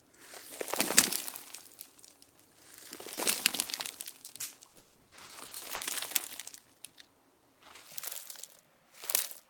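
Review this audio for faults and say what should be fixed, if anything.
Short concealed packet loss at 3.15–3.19 s, 3.63–3.69 s and 4.25–4.29 s: packets missed the decoder, and 20, 40 and 20 ms were patched by extending the preceding sound, leaving brief smears or wobbles. A larger jitter buffer would prevent this.

Repeated packet loss (robotic sound) from 4.67 to 5.83 s: nine successive gaps, the longest 180 ms, meant about 40% of that stretch was synthesized, giving choppy audio. Fixing the underlying network congestion or adding forward error correction would prevent this.

A section at the wrong speed runs from 7.87 s to the end. It plays at twice the original rate, most likely from a clock or sample-rate mismatch, so it sounds hurried and roughly ten semitones higher. Matching the playback clock to the recording rate would prevent this.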